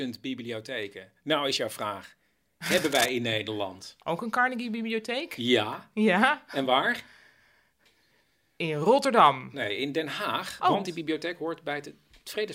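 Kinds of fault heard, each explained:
Cable scratch noise, 2.66 to 3.09 s: likely a worn cable or connector being moved, its contact resistance changing rapidly. Right after "is jouw vraag", dense, uneven scratching rustles over the speech for under half a second, only slightly quieter than it.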